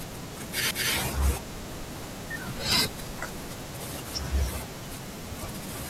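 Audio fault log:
0.71 s, CD skip: the speech cuts for a very brief mute, heard as a tick, and resumes from a different point on the disc because the laser jumped tracks. Unlike a simple click or dropout, the continuity itself breaks rather than picking up where it left off.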